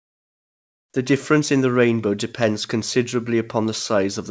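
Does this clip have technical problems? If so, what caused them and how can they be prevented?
Yes, there are two related problems. From the start to 0.94 s you get comfort noise in place of the background. The real room sound is swapped for a flat, featureless hiss about 25 dB quieter than the background around it, which itself sits about 51 dB below the loud parts. That's likely the sender's discontinuous transmission kicking in during the silence, with the receiver generating synthetic noise to fill the gap. To prevent it, turn off DTX on the sending side, or use a comfort-noise setting that tracks the background more closely.

Right at the end of that stretch, from 0.92 to 0.94 s, there's an onset clipped by the voice detector. The speech comes in abruptly, missing its soft 20 ms lead-in, with comfort noise still sitting where the beginning should be. That likely comes from the voice detector being a touch slow to notice the speech had started, so those first moments were never sent. 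To prevent it, give the detector some look-ahead, or disable VAD-driven DTX altogether. The band also stops at 8 kHz, which fits a wideband call codec like G.722 at 64 kbps.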